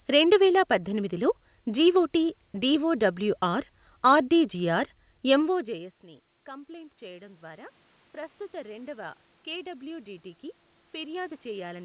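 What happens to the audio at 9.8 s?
At 9.8 s the audio is near the end of an automatic gain rise that runs from 5.65 to 10.29 s. After the level at the microphone fell by about 23 dB, as the talker moved back around 5.5 s, the gain control slowly raised its gain by about 8 dB. Voice and room noise swell together. On a waveform the envelope ramps upward, and a spectrogram shows the noise floor brightening alongside the speech.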